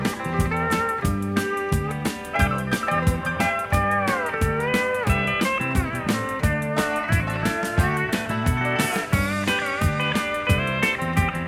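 No technical faults are audible.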